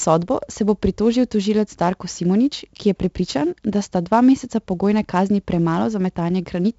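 Throughout, 4-bit ADPCM compression stores each sample as a coarse step from a prediction, leaving gritty hiss on loud speech, smeared attacks and nothing above 7.7 kHz, fitting a 64 kbps stream.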